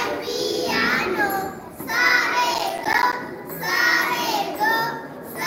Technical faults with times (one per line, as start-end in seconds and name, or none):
2.51-3.13 processor overload crackle